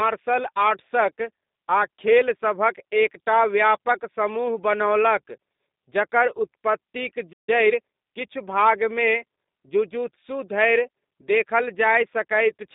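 Throughout, the speech has passed through the G.729 codec at 8 kbit/s, which rebuilds each 10 ms frame from a vocal tract filter, a pitch predictor and a few pulses instead of keeping the waveform. Everything is confined to roughly 200 Hz to 3.7 kHz, and the damage is plainly audible as a rough, slightly synthetic, buzzy texture.

From 7.32 to 7.49 s, a playback stall cuts the sound off mid-flow. The player likely ran short of buffered data or had its thread held up, so its output falls silent until it recovers.

From 7.49 to 8.09 s, time-compressed catch-up follows. The player clears its backlog by cutting out small slices and cross-fading over the joins, running at about 1.25 times normal speed. The speech sounds hurried but keeps its pitch.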